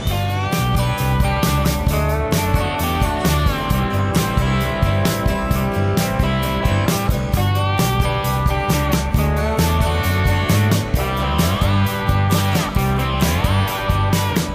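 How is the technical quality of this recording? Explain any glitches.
Nothing in the recording stood out as a technical problem on listening, so there are no glitches to explain.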